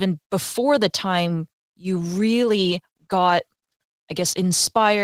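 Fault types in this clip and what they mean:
Opus voice compression: prediction coding below 8 kHz plus a sparse upper layer, fitting about 16 kbps, leaves speech hoarse, slightly robotic; spectrogram shows patchy high-band energy.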